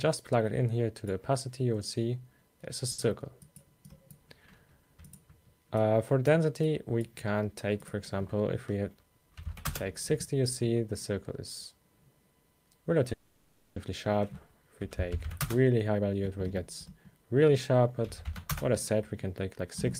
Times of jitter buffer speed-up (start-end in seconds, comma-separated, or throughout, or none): 8.70-9.11, 15.86-18.00, 18.72-19.86